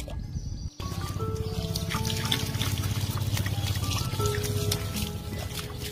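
From 1.97 to 3.97 s a doubled audio track appears: a second copy about 300 ms late, about 5 dB quieter, likely from a slower capture path, starting and stopping abruptly without echo decay.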